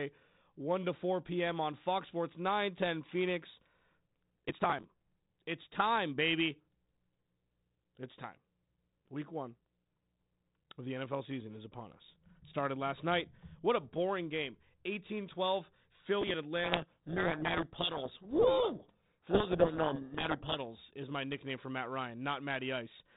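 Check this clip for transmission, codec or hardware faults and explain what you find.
Two kinds of fault are present: processor overload crackle in two bursts, and a codec payload misread affecting the G.726 telephone-band speech.

Processor overload crackle, 4.46 to 5.32 s and 16.22 to 16.34 s: missed processing deadlines drop short slices, around 10 ms each, producing gritty, tearing crackle over the speech.

Codec payload misread, 16.64 to 20.59 s: the decoder reads the G.726 code words in the wrong bit order, burying the speech under harsh, rasping distortion until alignment returns.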